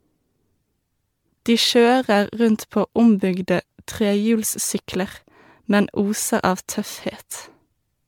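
Speech with generation loss throughout: swirly, hollow and smeared, yet extending to 19.9 kHz, unlike one low-bitrate encode; likely about ten MP3 re-encodes, fitting 128 kbit/s.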